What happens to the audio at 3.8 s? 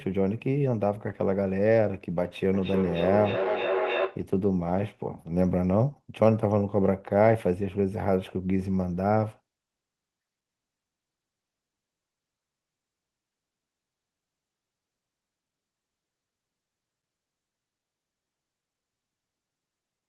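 At 3.8 s you're in the middle of a feedback echo between two devices, running from 2.54 to 4.31 s. Another device in the room replays the sound into a microphone its own canceller can't clean, so it keeps returning roughly every third of a second, thinner and ringier, peaking about 3 dB below the speech.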